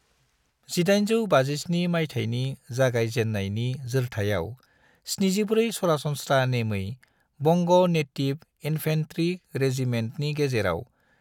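No technical faults can be heard anywhere in this speech recording. There is nothing to place in time order.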